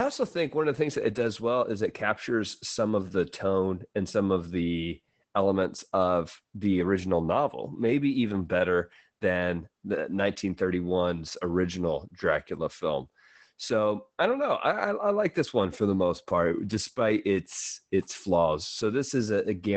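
Across the whole clip, the speech carries Opus voice compression. The SILK linear-prediction coder is doing the work in wideband mode. Nothing is heard above about 8.6 kHz, so the top of the spectrum is cut off cleanly. The damage is plainly audible. The voice sounds muffled and slightly hoarse, with a faint robotic edge. That comes from coarse coding of the excitation signal, which fits a low bitrate of around 12 kbps.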